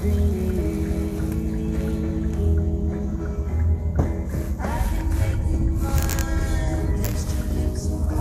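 Throughout the clip, the audio has likely passed through MP2 compression at a rate low enough to starve it of bits, around what an 80 kbps stream would allow. Layer II divides the spectrum into 32 sub-bands and shares out bits between them. Here nothing survives above about 16.6 kHz, so the top end sounds dulled. The remaining bands are coarsely quantised and flicker in and out, giving a plainly audible gurgling, granular roughness.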